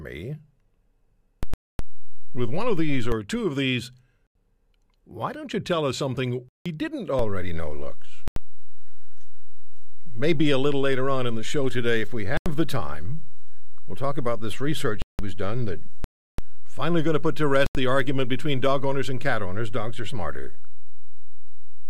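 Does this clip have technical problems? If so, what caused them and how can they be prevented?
Yes. There are two kinds of fault here, a DC step and repeated blocks of digital silence, in this speech clip.

DC step: the waveform's zero line jumps at 1.43 s, holds, and steps back at 3.12 s, just before "two of these". It jumps again at 7.19 s and stays offset to the end. Each jump is a low thump while the speech carries on unbroken, which sets it apart from a dropout. The cause is an offset switched into the signal path or a converter recalibrating mid-take. Prevention: high-pass or DC-block the input, and keep converters from recalibrating during recording.

Block of digital silence: the audio cuts hard to zero and returns with no fade. This happens at 1.54 s (256 ms), 4.27 s (85 ms, just after "two of these"), 6.49 s (171 ms, after "you tell us something"), 8.28 s (85 ms), 12.37 s (85 ms), 15.02 s (171 ms), 16.04 s (341 ms) and 17.66 s (85 ms). 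Unlike the DC step, the sound itself disappears. The lengths come in multiples of 85 ms, which fits a 4096-sample buffer at 48 kHz that was not filled in time. Prevention: use larger buffers and give the audio thread priority so output never underruns.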